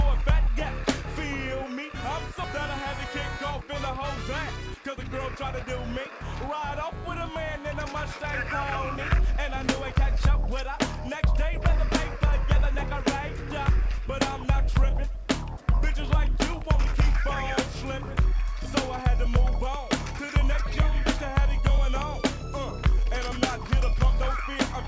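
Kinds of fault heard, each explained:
Skip ahead: At 2.44 s playback jumps forward with no gap. About a second and a half of audio is dropped, and both sides join directly.
Jitter buffer speed-up: The buffer trimmed short pitch-period pieces to cut delay. Four stretches from 4.7 to 23.8 s run 2 to 7 percent faster, unchanged in pitch.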